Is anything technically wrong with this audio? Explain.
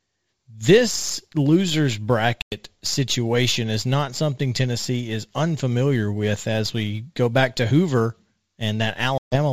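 Yes, there are two problems.

Throughout the recording, a fine hiss and roughness rides on the speech. It grows on loud and bright sounds and disappears in the pauses. This is sample clock jitter: the converter's clock wanders by a few microseconds, so each sample lands slightly early or late. The resulting error scales with how fast the waveform is changing, so it follows the steep, high-frequency parts of the speech. Here it sits roughly 30 dB below the signal.

Two hard-edged holes cut the speech, one at 2.42 to 2.55 s, just before "situation is not something", and another at 9.18 to 9.37 s. In each, the sound drops abruptly to silence and then comes back slightly distorted before settling. This is packet loss on an ADPCM call. About 100 ms and 140 ms of audio went missing, which fits roughly five and seven 20 ms packets. Because ADPCM codes each sample relative to the decoder's running prediction and step size, the gap leaves the decoder out of step with the sender, and it takes a short while to track back. 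The G.722 wideband coding keeps speech clear up to about 7 kHz.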